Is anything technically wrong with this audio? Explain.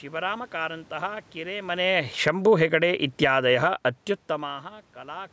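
Yes, the speech's level is pumped by automatic gain control. From 1.79 to 3.58 s the speech and room noise sink together by about 11 dB. That is automatic gain falling, as the control judged the input too loud or its background noise too strong. From 2.74 to 4.14 s the speech and background swell back by about 5 dB. That is automatic gain rising, with gain raised after the input seemed too quiet.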